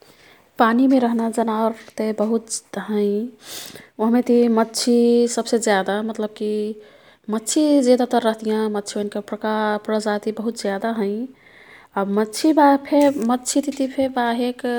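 A speech recording with no technical fault to point to. Nothing in it calls for a time or a cause.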